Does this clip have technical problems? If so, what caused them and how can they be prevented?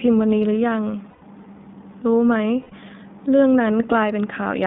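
Yes. iLBC codec damage runs throughout: the speech is confined to roughly 150 Hz to 3.7 kHz and sounds rough and synthetic, which fits iLBC's 20 ms frame mode. Lost iLBC frames at 1.10 to 1.26 s (about 120 ms) and 2.62 to 2.74 s (about 100 ms) were concealed by repeating the last pitch cycle with added noise, so each gap sounds like a held, buzzy vowel before the voice snaps back. Using a wideband codec with forward error correction and a jitter buffer on a less congested network would prevent both problems.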